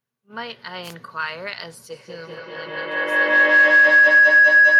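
A wireless microphone noise hit at 0.82 to 0.95 s: the radio link briefly fades out, so receiver noise swells into a short swish of static over the speech. A feedback howl starts at 1.9 s and runs to the end: a microphone-to-loudspeaker loop keeps gaining level, narrowing to a tone around 1.5 kHz, pulsing about every fifth of a second, and reaching about 19 dB above the speech.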